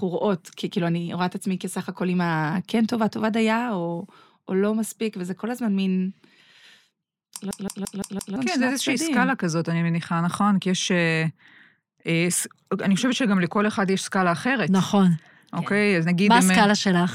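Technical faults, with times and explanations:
7.51–8.36 s: system hang loop. The playback stalls and a single 171 ms slice of speech repeats five times, at about 5.9 Hz, giving a machine-gun stutter. This fits an 8192-sample ring buffer replaying while the driver froze. Roughly a second of audio is lost.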